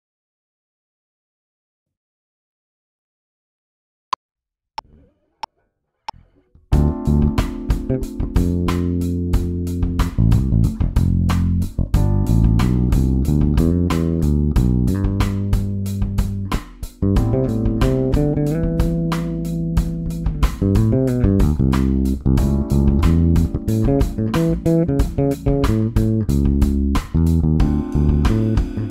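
No technical faults can be heard anywhere in the audio. At no point does anything in the recording or playback chain draw attention to itself.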